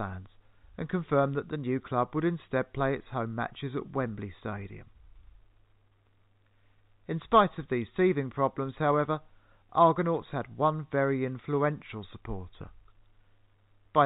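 Telephone-band speech, with no technical faults to report.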